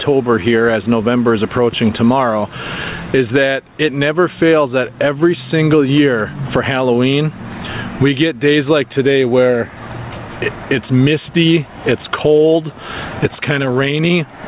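Gain pumping runs through the whole clip: the gain ducks by around 20 dB under each loud sound, leaving the level squashed. The likely cause is input gain set far too high, with a fast limiter clamping down. The band stops at 4 kHz, consistent with a G.711 mu-law call path.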